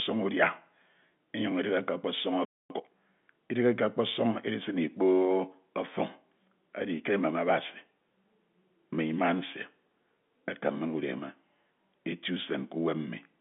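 At 2.45 s the speech cuts to dead silence mid-flow and stays gone for about a quarter of a second, resuming at 2.70 s. This is a playback stall: the output simply stops while the player waits, most likely because its buffer ran dry or its audio thread was held up, and nothing reaches the speaker until data arrives again. The gap sounds abrupt rather than faded, and the telephone-band character, with nothing above about 3.7 kHz, is the same on both sides of it.

From 2.70 s to 2.94 s the speech rushes forward at roughly double speed while keeping its normal pitch. This is time-compressed catch-up: having fallen behind during the stall, the player recovers the lost time by dropping short slices of audio and cross-fading the remaining pieces together. That splicing at a 2x rate produces the hurried delivery, before normal pacing returns after 2.94 s.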